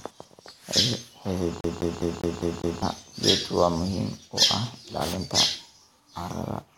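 A CD stuck on one turn runs from 1.61 to 2.82 s: a scratch keeps knocking the laser back one track, so the same 0.2 s slice of speech replays six times, each jump marked by a brief mute, giving the quick, even stutter of a skipping disc.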